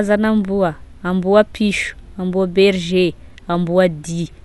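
Right through the speech, it sounds like Dolby Digital compression was likely squeezed hard: dull, nothing above 11.4 kHz, with plainly audible rough, fluttery noise, which fits a low bitrate around 64 kbps.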